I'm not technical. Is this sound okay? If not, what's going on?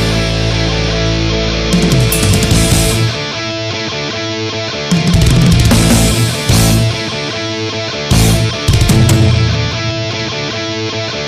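No. Hard clipping runs through the whole clip: the sound was too loud for the recording to hold, so its loudest peaks were cut flat, causing crackle on the peaks.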